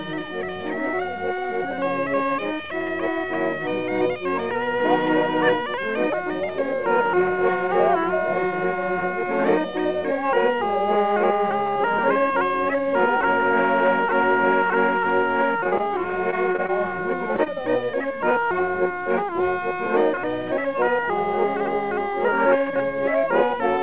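From 15.6 to 16.7 s the sound turns choppy and robotic, with small pieces dropping out. This is repeated packet loss (robotic sound). Nine gaps, none longer than about 26 ms, were each filled by stretching the preceding audio, so around 14% of that stretch is patched rather than real.

Shortly after come two brief smears or wobbles, at 17.36 to 17.40 s and 17.44 to 17.48 s. Each is a short concealed packet loss: about 20 ms failed to arrive in time, and the receiver continued the last sound before blending back into the actual signal. Nothing is heard above 4 kHz, which fits a narrowband G.711 A-law call path.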